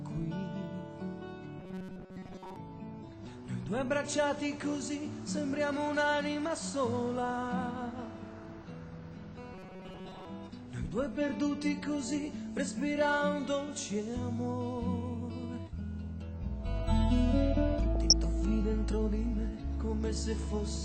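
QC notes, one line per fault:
1.60–2.56 s and 9.54–10.27 s: robotic sound from repeated short buffers. The audio becomes a rigid, metallic buzz at 188 Hz. Most of the real sound is skipped. The likely cause is a piece of about 5.3 ms replayed over and over.
17.95–18.13 s: DAB burbling. A burst lasts about 0.17 s. Bit errors slipped past error correction into the MP2 data. Wrong samples put short noise blips in single sub-bands and wrong scale factors make sub-bands jump in level, which fits a handful of damaged frames.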